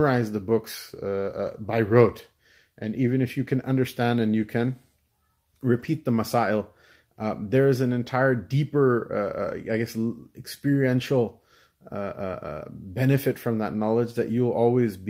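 Lost packets rebuilt from error correction occur at 5.79 to 5.85 s and again at 13.15 to 13.17 s. In both places the speech carries on without a gap, but a short stretch turns rougher and noisier: about 40 ms in the first, consistent with two lost packets, and about 20 ms in the second, consistent with one. The decoder filled each hole from a low-bitrate copy carried in the following packet, so the missing frames return at reduced quality.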